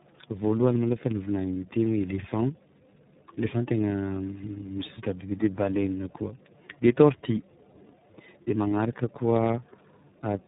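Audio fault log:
Throughout: tandem speech coding. The speech sounds rough, muffled and warbly, more so than a single low-rate coder would leave it. That points to the audio being decoded and re-encoded at several network borders, which fits a chain of roughly three speech codecs such as iLBC and G.726, with each stage compressing the previous one's artefacts. On a spectrogram, energy stops sharply at 3.8 kHz, and harmonics look smeared and blotchy rather than cleanly striated.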